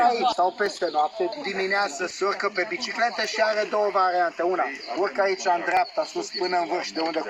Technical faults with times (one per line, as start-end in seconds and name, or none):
0.66 dropped samples
3.24 dropped samples
5.77 dropped samples